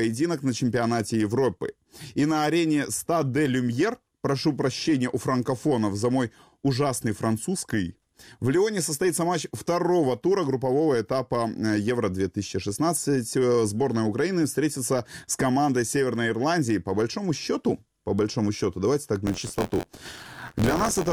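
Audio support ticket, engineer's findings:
Robotic 86.1 Hz buzz, 19.26–21.12 s. Buffer tearing: write and read pointers crossing, splicing in about a tenth of audio from one lap (roughly 20 ms) earlier; fits a 512-sample buffer.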